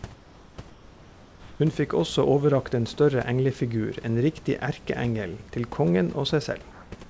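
Discontinuous transmission likely stopped sending audio during pauses, so comfort noise in place of the background fills three gaps: 0.14 to 0.58 s, 0.70 to 1.60 s, and 6.72 to 6.92 s. Each time, the room's natural background, sitting about 26 dB below the loudest speech, turns into a smooth, featureless hiss, about 3 dB and then about 4 dB quieter in the first two gaps and about 1 dB louder in the last.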